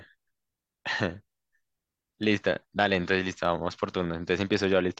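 No technical faults can be heard anywhere in this speech recording. Nothing in the sound shows any break, distortion or dropout.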